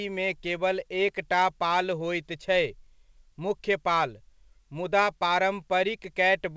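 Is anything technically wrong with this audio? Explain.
No, nothing technically wrong.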